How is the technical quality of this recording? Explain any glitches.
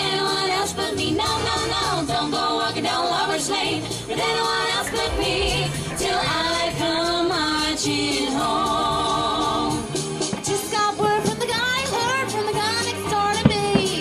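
Nothing here to explain: the recording runs smoothly all the way, with no glitches to point to.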